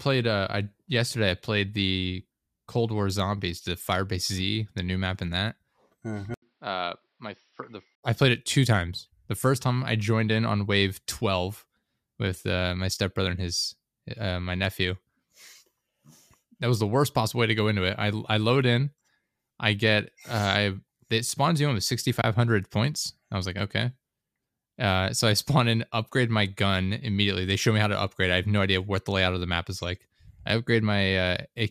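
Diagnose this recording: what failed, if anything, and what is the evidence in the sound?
Around 6.34 s the speech goes dull and boxy: an 80 ms gap, then nothing above 5.7 kHz, level down about 5 dB and a new noise floor roughly 45 dB under it, lasting to 8.03 s, just before "I played it two". Likely an input switched to a poorer device at the driver level.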